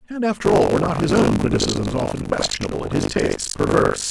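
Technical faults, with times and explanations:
0.44–4.10 s, buffer tearing: a steady 50 Hz robotic rattle over the speech, as roughly a third of each 20 ms period replays audio about 70 ms old, hard-joined at both ends. The waveform jumps every 20 ms, and the spectrogram shows matching vertical stripes only where speech is present.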